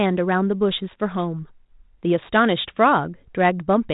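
Nothing stood out as a technical fault on listening through this speech clip.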